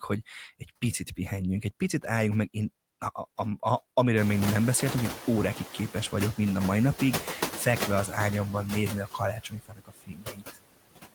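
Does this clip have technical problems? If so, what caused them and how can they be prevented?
Yes. Noise suppressor artifacts run through the whole speech clip. The suppressor lowers the bands it judges to be steady noise by about 19 dB, recalculating frame by frame. The background therefore sinks in the gaps and rises again under the speech. Prevention: lower the suppression depth or use a smoother gain estimator, and reduce room noise at the source so less suppression is needed.

Speech cut by the noise suppressor occurs twice. From 0.59 to 0.83 s, just before "pihenjünk egy picit álljunk", the gain dips by up to about 17 dB. About a tenth of a second of the speech is swallowed. From 9.06 to 10.59 s, after "az ágyamban nézni a", the drop reaches about 21 dB and roughly a second of speech goes faint. In both places the suppressor classified quiet speech energy as noise. Prevention: use a speech-presence-aware suppressor with a gain floor so soft passages are not pulled down with the background.

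The noise suppressor catching up is heard from 4.17 to 5.94 s, before "vagyok mind a mai". The room noise jumps by about 23 dB at around 4 s, settling about 10 dB below the speech. The suppressor's noise estimate lags the jump. At first it removes only about 5 dB, so the new noise comes through with much less reduction. It then sinks over 1.77 s as the estimate adapts. Prevention: use faster noise-estimate tracking for sudden level increases.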